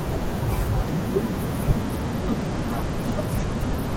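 Speech clip with a Bluetooth SBC bit pool drop from 1.82 s to the end: treble dulls and gritty quantisation noise rises, consistent with the bit pool falling from 28 to about 12, near 96 kbps.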